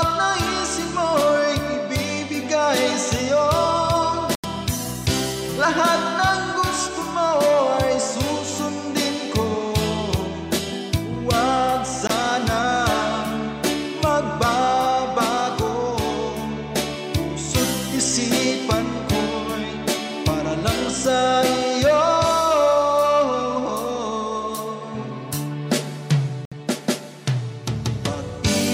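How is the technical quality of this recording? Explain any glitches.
The recording has three brief holes where the sound disappears. At 4.35 to 4.46 s, 12.07 to 12.11 s and 26.45 to 26.53 s, the audio cuts out sharply. It resumes further along, as though it had kept playing. These are likely Bluetooth dropouts. Packets reached the headphones too late and were discarded.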